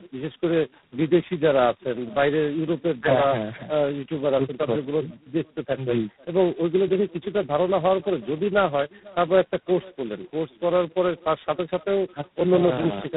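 From start to finish the speech carries an echo with no canceller: the far end's loudspeaker feeds back into its microphone, and nothing removes it, so each phrase returns roughly half a second later, about 25 dB down and thin. On a spectrogram every syllable has a faint, delayed ghost; the waveform shows small trailing bursts after each loud stretch.

Also throughout is tandem speech coding, with the signal decoded and re-encoded at each link. The rough, muffled, warbling quality points to three low-rate speech coders in a row. A spectrogram shows a hard ceiling at 3.9 kHz and smeared, blotchy harmonics.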